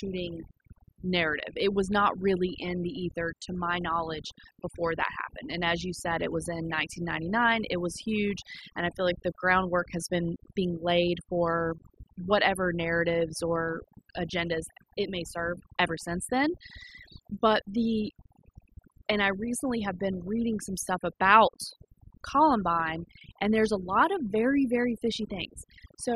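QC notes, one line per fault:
Throughout: overdone noise removal. Heavy noise reduction zeroes bands near the noise floor, leaving near-silent gaps with twinkling specks.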